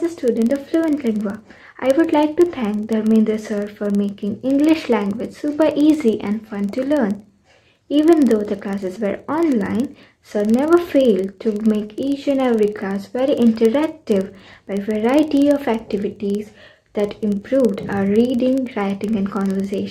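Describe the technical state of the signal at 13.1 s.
At 13.1 s you're hearing the filter restarted on every block, and that's not local to this moment; it runs through the whole clip. Some filter is dropping its memory at each block boundary and starting again from silence, so every block opens with a little transient. Those land about 21.5 times a second, which fits a 2048-sample block, giving a low ticking buzz that rises and falls with the sound's level.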